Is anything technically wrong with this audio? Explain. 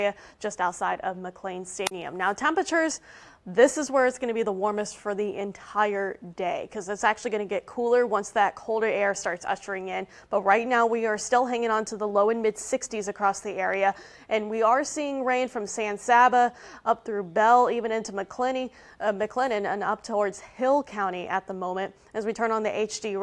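No technical faults are audible.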